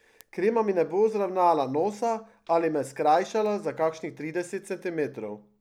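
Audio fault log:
0.21–5.09 s, word clock ticks: the receiving device runs on its own clock, drifting roughly 40 ppm from the sender's, so single samples slip about every half second, giving around ten sharp, evenly spaced ticks of uneven strength across the speech.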